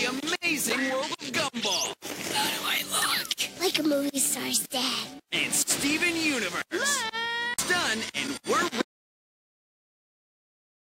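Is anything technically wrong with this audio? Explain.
Yes. An audio dropout to silence starts at 8.82 s and runs to the end. The input was likely lost through a disconnected device, a failed link or a stray mute while recording continued, writing only silence. The sound cuts off mid-flow, leaving a dead gap without room tone.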